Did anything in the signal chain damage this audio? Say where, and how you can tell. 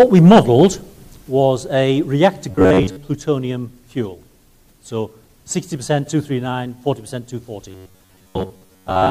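Yes. Robotic sound from repeated short buffers, 2.51–2.97 s and 7.69–9.10 s. A rigid 93.8 Hz buzz points to likely buffer underruns looping 11 ms chunks.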